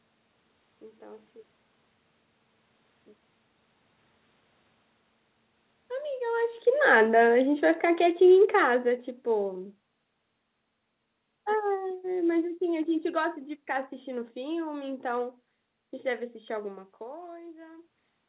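From 6.74 s to 10.03 s you can hear the automatic gain falling. The AGC judged the input too hot or its background too noisy and eased its gain down, about 9 dB in total over those three-odd seconds. The speech starts out loud and then sinks, and the room noise sinks right along with it. That's the giveaway that separates it from the talker shifting position just before, around 6 s, where the background stays put.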